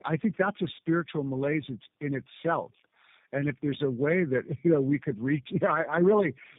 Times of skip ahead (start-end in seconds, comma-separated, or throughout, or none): none